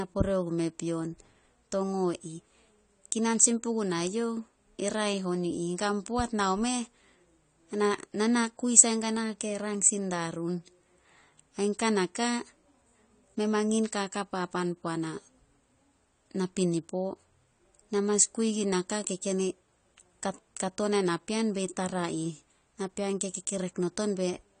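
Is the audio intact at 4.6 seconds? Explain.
No. At 4.6 s, as throughout the clip, the speech has been through AAC compression, likely AAC-LC at a low rate. Nothing remains above 9 kHz, which fits a bitrate around 32 kbps. Starved of bits, the encoder discards the top of the spectrum and quantises each frame's frequency lines coarsely. That leaves holes between them. The speech comes across dull and smeared, with plainly audible warbling and a fizzy edge on sibilants and held sounds.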